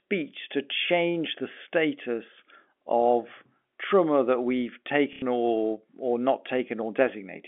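At 5.13 s there's packet loss with the last packet repeated: about 90 ms went missing and the stuck packet was looped, giving a robotic stutter through the telephone-band sound.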